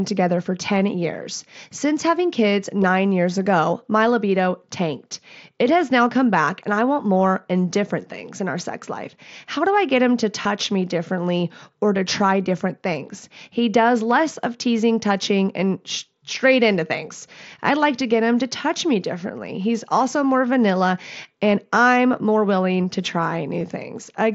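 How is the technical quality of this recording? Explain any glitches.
Two short dropouts from concealed Bluetooth headset packet loss, heard through the band-limited mSBC headset sound. At 10.42 to 10.45 s, between "I get him to" and "me differently or to", about 30 ms went missing, which fits a run of several lost packets. The receiver patched the gap by repeating the best-matching recent stretch of waveform, so you get a brief buzzy held tone and a slight warble as real audio resumes. At 23.6 s, just after "I'm more willing to", a single lost packet is almost fully hidden.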